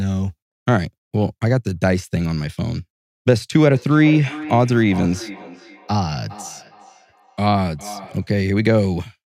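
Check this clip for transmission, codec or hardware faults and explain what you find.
One fault: feedback echo between two devices, from 3.71 to 8.33 s. A second device in the room plays this call and the first device's microphone sends the sound back, beyond any echo canceller's reach. The speech returns about every 0.4 s, thinner and ringing, at about 15 dB below the speech.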